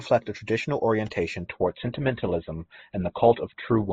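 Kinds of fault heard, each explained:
Adaptive stream at a lower bitrate: the player switched to a lower-quality version of the stream as throughput fell. At 1.46 s, right after "a traditional orientation", the speech abruptly loses everything above 4.1 kHz and turns thin to the end, with no gap.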